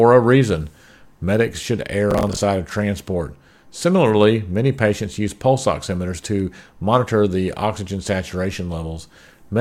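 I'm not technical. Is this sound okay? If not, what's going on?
No. From 2.11 to 2.39 s there is processor overload crackle: a short burst of gritty, tearing noise over the speech. The computer handling the audio fell behind and missed many tiny deadlines in a row. Each time, instead of fresh sound, it replayed a scrap of what had just played, with hard edges. The texture points to around fifteen of these slips, each roughly 10 ms long. The crackle stops once the load eases.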